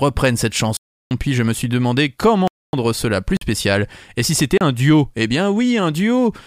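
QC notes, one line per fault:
0.77–1.11 s, 2.48–2.73 s, 3.37–3.41 s, 4.58–4.61 s: block of digital silence. The speech cuts hard to silence and back with no fade. The 341 and 256 ms gaps are heard as holes, and the 44 and 33 ms gaps as short holes. On a waveform they are flat lines, and on a spectrogram black columns edged by thin broadband streaks.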